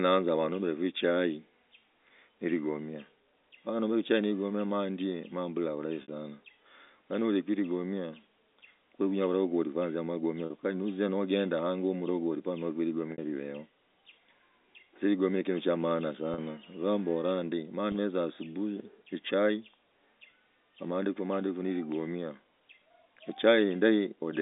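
Packet loss with pitch repetition occurs five times in this telephone-band speech clip: at 6.02 to 6.08 s (60 ms), 10.46 to 10.50 s (40 ms), 13.12 to 13.18 s (60 ms), 16.34 to 16.38 s (40 ms) and 17.92 to 17.94 s (20 ms). Each gap fits one to three lost 20 ms packets. The receiver fills it by replaying the last pitch cycle, so the sound briefly holds on a slightly buzzy, static tone before normal speech resumes, while the G.711 line itself passes cleanly.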